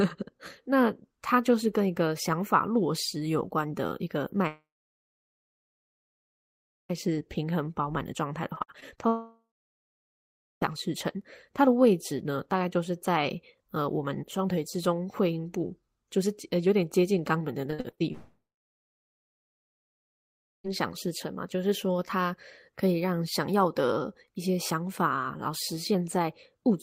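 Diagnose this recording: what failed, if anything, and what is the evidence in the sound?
The sound smears into a fading buzz and then falls to near-silence at 4.47–6.91 s, 9.08–10.63 s and 18.12–20.66 s, resuming later with material missing. This is a long network dropout, likely a stalled stream, where the receiver's concealment runs out after a few tenths of a second.

Choppy, robotic stretches occur at 8.55–9.02 s and 17.70–18.02 s, each with six short holes (longest 56 ms and 41 ms). This is repeated packet loss at the network stage, with patched gaps covering about 28% and then half of each span.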